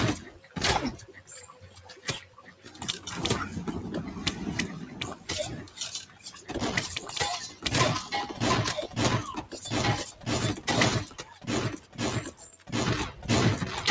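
A noise suppressor built for speech stays active across the whole clip and treats sustained, steady parts of the sound as noise. Its gain keeps shifting by about 15 dB, so onsets pass while held portions and decaying tails are pushed down, giving a pumping, fluttering, thinned quality. The call microphone path passes nothing above 8 kHz, which is part of normal call processing and not a fault.

The sound is cut by the noise suppressor at 0.26 to 0.56 s, 0.97 to 2.81 s, 5.63 to 6.5 s, 7.49 to 7.65 s, 9.42 to 9.58 s, 10.11 to 10.68 s and 11.05 to 12.71 s. In each of these, the suppressor mistakes ongoing sound for background and lowers it by about 10 to 12 dB at the deepest point. The longer spans, near 1.0 to 2.8 s and 11.1 to 12.7 s, lose roughly a second or more of sustain. The shorter ones register as brief dips.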